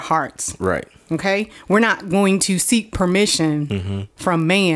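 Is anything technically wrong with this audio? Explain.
Yes. Throughout the speech, the resampler restarted on every block. The conversion appears to have been done from 48 kHz down to 24 kHz in separate 20 ms chunks, each processed as if nothing came before or after, so the filter at every boundary worked from missing or wrong neighbouring samples. Each edge picks up a small error, and at 50 per second these merge into a buzz at 50 Hz that rides on the speech and drops away in silences.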